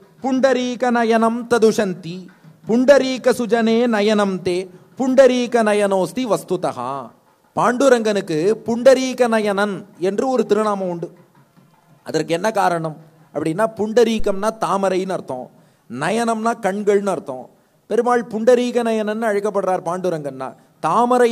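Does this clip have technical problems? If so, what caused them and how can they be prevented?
Yes. A phantom power thump occurs at 14.2 s and dies away by 14.55 s. It is a deep, low thud that peaks at about -12 dBFS. It decays quickly, over roughly 81 ms. The cause is a supply, most plausibly 48 V phantom power, being switched while the input was live. That sudden voltage step passes through the input's coupling capacitors and comes out as a low-frequency pulse. To prevent it, mute the channel or pull the fader down before switching phantom power on or off.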